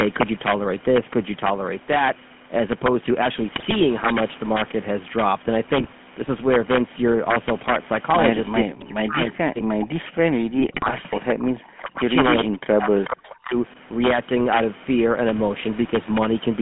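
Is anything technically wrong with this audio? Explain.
Yes, several faults are audible in this speech, layered over the call's normal microphone processing.

Integer overflow runs throughout. Loud peaks push about 5 dB past the integer limit, and a small fraction of samples wrap to the opposite sign instead of being limited. Each wrap becomes a violent crack, far harsher than ordinary clipping.

The GSM full-rate codec is also present throughout, at 13 kbps over a 150 Hz to 3.4 kHz line. It rebuilds the voice from a vocal-tract model driven by sparse, regularly spaced pulses, so the speech sounds plainly buzzy and gravelly, with nothing above 3.4 kHz.

GSM bit errors occur at 3.56–3.75 s, 5.77–5.93 s and 10.56–11.01 s. Corrupted bits reached the decoder and scrambled its filter, pitch and gain values. The result is bursts of squawks, pops and gargling, with the longest burst near 10.6 s.

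Speech suppressed in double talk appears at 8.62–9.19 s, 9.35–11.57 s, 11.81–12.14 s, 12.43–12.53 s and 12.77–13.55 s. The voice sinks by roughly 35 to 40 dB or cuts out in pieces. This is likely an echo canceller ducking the talker while the far side was also speaking.

An echo leak is heard at 12.54–12.74 s and 13.29–13.35 s. A faint copy of the voice arrives 438 ms late, about 20 dB below the speech. The likely cause is a loudspeaker echo that the far end's canceller failed to remove fully.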